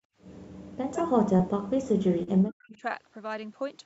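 From 0.00 to 0.15 s the background is gated by the echo canceller: room sound drops by about 36 dB for roughly 150 ms, then returns as the canceller releases.

Between 0.64 and 2.83 s the speech dips and cuts out in pieces, totalling around two seconds and falling by around 40 dB at worst. The likely cause is speech suppressed in double talk, with the canceller attenuating the near talker while the far side is also active.

At 2.23 to 2.29 s a short concealed packet loss leaves about 40 ms missing. The decoder fills it by extending the preceding sound, giving a brief smear before blending back.

From 2.72 to 2.77 s a faint delayed copy of the speech appears, around 25 dB below it and trailing by about 0.22 s, likely an echo leak past the loudspeaker side's canceller.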